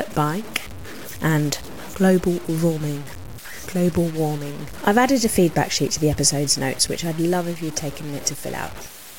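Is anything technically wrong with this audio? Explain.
Yes. Throughout the speech, a grainy distortion follows every syllable, likely low bit depth without dither, truncated to about 6 bits. Error sits roughly 20 dB down, showing stair-stepped waveforms and broadband hash tracking each sound on a spectrogram.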